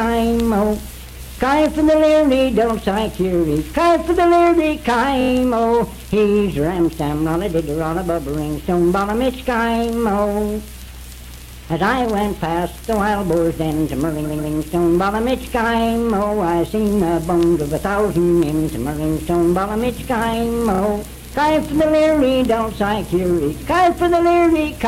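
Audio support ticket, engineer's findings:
Repeated frames at 5.20 s, 14.24 s and 20.74 s. Stutter at each repeat. 5.20 s: a 23 ms block played four extra times. 14.24 s: 139 ms block, twice more. 20.74 s: 22 ms block, twice more. Encoder or transport duplicating compressed frames. Unlike a dropout, the repeated audio is identical, with no gap, and the clip gets longer.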